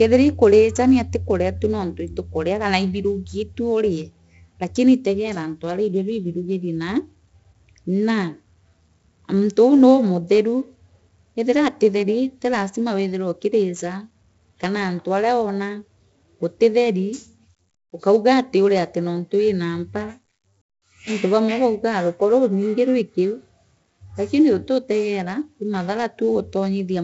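4-bit ADPCM compression throughout: coarse 4-bit prediction steps leave heavy gritty hiss tracking the speech level, with nothing above 7.7 kHz, which fits a 64 kbps stream.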